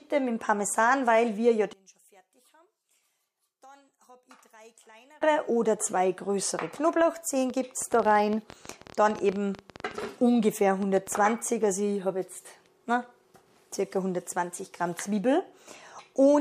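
From 1.73 to 5.22 s the sound nearly collapses in mono, dropping about 30 dB and leaving only a faint residue. That's the classic one-channel-inverted signature: one side is likely flipped in polarity, so everything common to both channels cancels when they're summed. Then from 7.5 to 11.18 s there's a train of clicks, roughly forty pops at an uneven pace averaging about 11.7 per second, each poking a little above the sound itself. It's likely interference from nearby gear or a faulty connection injecting pulses.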